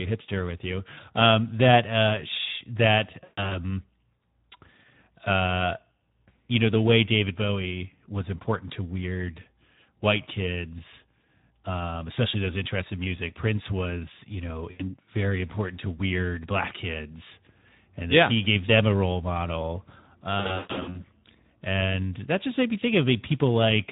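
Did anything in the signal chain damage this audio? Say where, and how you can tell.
Yes. Two stages did the damage. The codec stage is a Speex codec running at a low-to-middle quality setting, which fits a bitrate around 11 kbps. The damage is plainly audible across the whole speech clip. The voice sounds hoarse and noisy because the CELP excitation is short of bits, and any top band above 4 kHz is a shaped hiss rather than real detail. Unlike MP3 or AAC, it doesn't smear or warble transients. It roughens the voice itself.

The network stage adds VoIP packet loss concealed by the speech codec, at 3.23–3.60 s, 14.71–14.95 s (after "was you know", before "very important to weird") and 20.39–21.05 s (after "them a role model", before "and that just made"). At each gap the decoder stretches the last pitch and filter into a fading buzz or coloured noise, and the voice stays weak briefly afterwards. 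The first and third gaps sound like scattered dropouts, with the longest run about 140 ms. A clean gap or a click would instead point to a buffer dropout.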